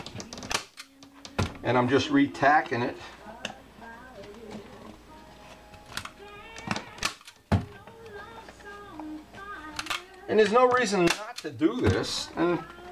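No dropouts, clipping, glitches or other technical faults turn up anywhere in the clip.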